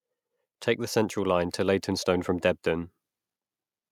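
From about 0.93 s to 2.94 s you can hear automatic gain rising: the level creeps up by about 3 dB over roughly two seconds. The gain control decided the input was too quiet and slowly pushed its gain up. Because it's acting on everything coming in, the speech and the background noise swell together, so the room seems to get louder along with the talker rather than the voice simply coming forward.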